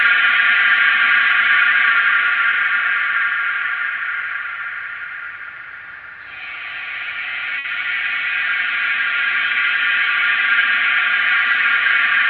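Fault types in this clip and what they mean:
Short stall from a late packet, at 7.58 to 7.67 s: a packet arrived late and the jitter buffer ran dry, so the receiver held the last sound for about 60 ms, then resumed where it stopped. Nothing is lost, but everything afterward plays 60 ms later.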